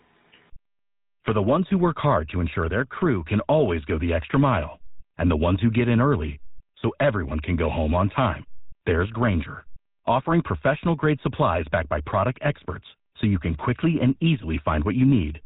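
From start to finish, the speech carries the sound of the GSM full-rate codec, and the damage is plainly audible. The codec rebuilds the voice from a vocal-tract model driven by a coarse, regular pulse train. That gives a buzzy, gravelly roughness to the voice. Nothing survives above about 3.8 kHz, so sibilants are dull and the top end is missing. The result fits a bitrate of around 13 kbps.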